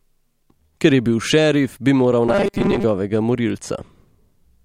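Around 2.28 s the voice turns robotic until about 2.85 s: a rigid, metallic buzz pitched at 200 Hz that still loosely tracks the speech. It's likely robotic sound from repeated short buffers. New audio wasn't arriving fast enough, so playback kept looping a tiny slice, about 5 ms, which fits that 200 Hz pitch. Most of that stretch is repeats rather than fresh audio, so the real sound in between just gets dropped.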